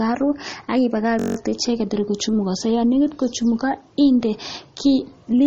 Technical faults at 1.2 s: MP3 compression; system hang loop

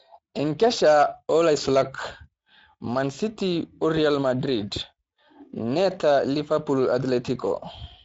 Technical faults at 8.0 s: Speex codec

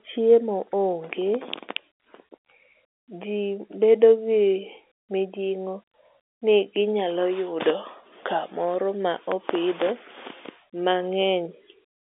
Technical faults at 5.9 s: none

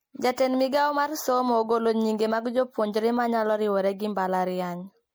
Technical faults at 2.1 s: generation loss

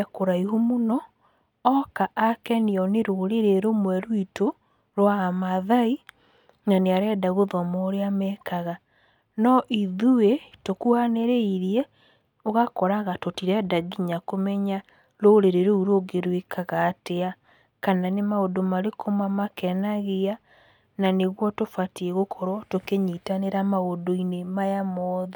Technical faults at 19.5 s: none

